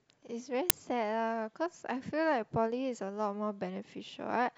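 At 0.70 s the speech is hit by an uninitialised buffer fault. A block of about 5 ms was played before any audio was written into it. Leftover memory was read as samples. The result is a brief, loud crack.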